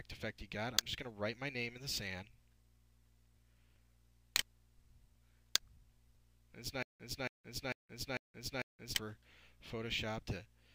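From 6.83 s to 8.95 s the sound stutters with silent gaps: one 276 ms burst plays five times, each followed by 172 ms of digital silence, repeating every 448 ms. The player likely stalled, replaying its last fragment at each retry.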